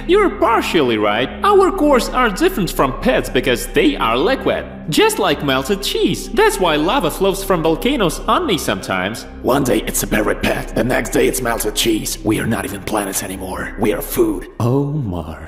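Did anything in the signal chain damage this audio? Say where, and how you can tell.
Yes. A brief click at 9.62 s is a repeated buffer at the driver stage: a 5.3 ms block, fitting 256 samples, replayed once when new audio arrived late.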